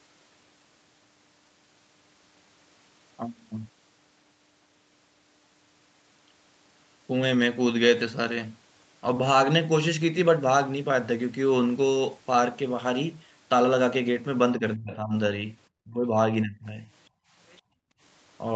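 A speech recording on a call, with nothing above 8 kHz, as a call codec path limited to that band would produce. The talker's voice sinks three times in the closing seconds: 14.59 to 15.13 s, 15.84 to 16.17 s and 16.43 to 16.85 s. The drops are roughly 25, 30 and 20 dB, each lasting a few tenths of a second. On a waveform the envelope pinches in sharply. On a spectrogram the harmonic bands fade before recovering. This is likely speech suppressed in double talk, where the echo canceller heard both sides at once and attenuated the near talker along with the echo. Right after, the background gated by the echo canceller drops out at 17.1 to 17.33 s by about 21 dB, and again at 17.61 to 18.0 s by about 27 dB, as the canceller clamps the microphone while the loudspeaker plays. The room noise floor collapses to a near-empty band on the spectrogram, with flat, hollow gaps in the waveform, then snaps back. 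Between those gaps, at 17.5 to 17.61 s, a very faint scrap of what is likely the other side's voice leaking through appears, roughly 35 dB below the speech level. It shows as a brief, weak smear of harmonics.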